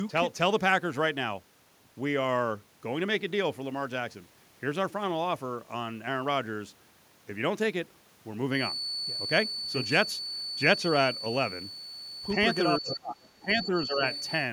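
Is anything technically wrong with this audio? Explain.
Yes. This speech clip has three faults that overlap near the end.

From 8.48 s to the end of the clip at 14.53 s, a feedback whistle sits behind the voice. It is a thin, steady tone at 4.5 kHz, roughly 10 dB below the speech, and its level swells and fades slowly. The likely cause is a loudspeaker-to-microphone loop held just short of runaway, so one frequency keeps ringing without growing. On a spectrogram it shows as a bright horizontal line at 4.5 kHz that starts at 8.48 s and never breaks.

Between 12.79 s and 14.01 s the speech is suppressed in double talk. For about a second in total, the voice dips, thins and drops out in pieces, at its deepest by roughly 25 dB. The likely cause is an echo canceller that could not separate the local talker from the far side speaking at the same moment, so it turned both down. The waveform shows the envelope collapsing in uneven chunks. 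On the spectrogram the upper harmonics vanish.

Inside and just after that stretch, the other side's voice leaks through in four brief scraps, at 12.90–12.97 s, 13.24–13.29 s, 13.63–13.67 s and 14.13–14.24 s. They sit roughly 10, 35, 20 and 25 dB below the talker. The likely cause is residual loudspeaker echo that the canceller left in the microphone signal. On a spectrogram they appear as short bursts of harmonic structure that don't line up with the main voice.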